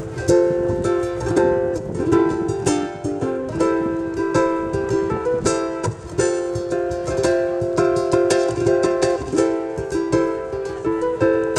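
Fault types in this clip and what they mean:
Periodic clock jitter: interference wobbles the converter clock at around 1 kHz, adding sidebands at that spacing around every component, giving a rough, metallic edge throughout.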